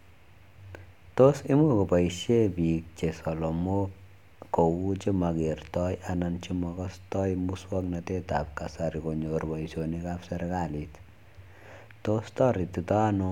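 No technical faults can be heard anywhere in the recording. The speech runs continuously, with nothing interrupting or disturbing it at any point.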